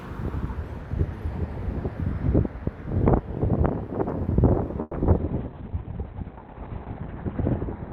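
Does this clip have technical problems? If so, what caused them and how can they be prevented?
Yes. From 4.81 to 4.95 s the sound stalls into a fading buzz for about 120 ms, with no true silence, then resumes where it stopped. This call audio freeze was likely caused by delayed packets draining the jitter buffer. On a waveform it shows as a decaying, repetitive stretch; on a spectrogram, smeared horizontal streaks. A deeper adaptive jitter buffer and a steadier network path prevent it.

At 5.03 to 5.06 s a short concealed packet loss leaves a brief smear. About 40 ms of audio never arrived, and 10 ms of synthesised continuation bridges the hole. The spectrogram shows a blurred sliver; the waveform shows a small discontinuity. Forward error correction or redundancy in the codec prevents this.

From 5.19 s to the end, a call bitrate drop from 48 to 6 kbps makes the sound coarse and muffled, holding at the lowest rate for about 2 s. 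The spectrogram's top edge falls from 20 kHz to 4 kHz, and the energy looks blotchy. Better bandwidth estimation and a higher minimum bitrate prevent it.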